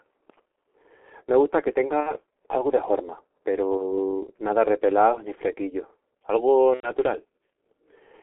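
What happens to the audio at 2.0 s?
From 2.00 to 2.18 s, right after "gusta que" and before "algu de", there is VoIP packet loss concealed by the speech codec. About 60 ms of audio went missing, consistent with two lost 30 ms frames. The decoder filled the gap by repeating its last pitch and filter settings at falling gain, producing a buzzy or noisy, fading smear rather than silence. Unlike a plain dropout, the sound is still damaged after the gap, because the decoder takes time to recover.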